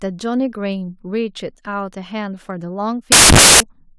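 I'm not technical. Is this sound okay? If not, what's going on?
No. From 3.12 to 3.60 seconds the speech is swamped by a burst of loud, harsh hissing noise. This is samples built from the wrong bytes: the player assembles each sample's bytes in the wrong order or offset, so tiny fluctuating details become huge random values.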